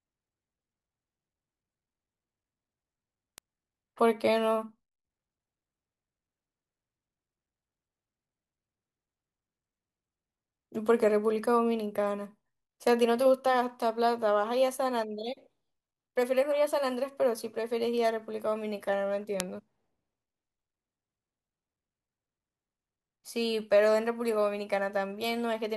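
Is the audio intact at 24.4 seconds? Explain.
Yes, at 24.4 seconds the speech plays through cleanly, with no dropout, click or other fault to be heard.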